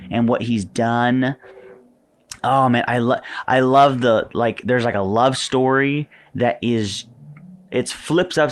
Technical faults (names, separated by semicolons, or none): none